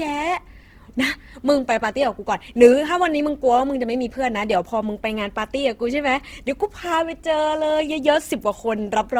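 A speech clip carrying plainly audible damage throughout that sounds like Opus compression: tones turn grainy, rough and noisy. Unlike MP3 swirl, the spectrum has few holes and extends to 20.2 kHz, likely CELT mode at a very low rate, around 16 kbps.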